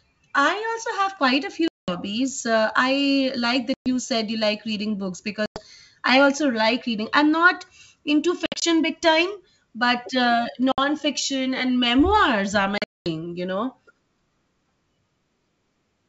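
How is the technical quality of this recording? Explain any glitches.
The recording is spoiled by packet loss on an ADPCM call. There are hard silent holes at 1.68, 3.74, 5.46, 8.46, 10.72 and 12.78 s, losing from 60 to 260 ms of audio. The decoder's predictor drifts out of step during each one, so speech comes back slightly distorted before settling. The G.722 wideband coding underneath adds at most a faint hiss up top.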